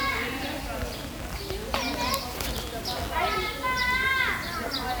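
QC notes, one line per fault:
Throughout: low bit depth without dither, a grainy distortion that rises and falls with the sound and breaks up quiet passages, likely from rounding to about 7 bits. Unlike dithered hiss, the error tracks the signal and sits only about 15 dB down.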